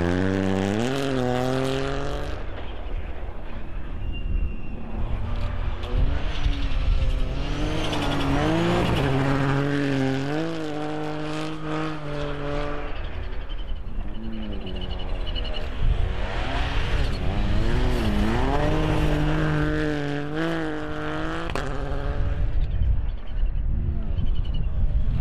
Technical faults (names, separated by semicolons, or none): DC offset